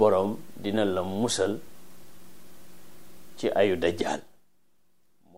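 From 4.04 to 4.48 s, a gain reduction is applied in unsmoothed 2 dB jumps, around thirty a second, rather than as a continuous ramp. This is zipper noise. Each abrupt jump puts a tiny discontinuity into the waveform, so as the level falls by roughly 20 dB the sound carries a rapid ticking, zipping texture that stops once the level settles.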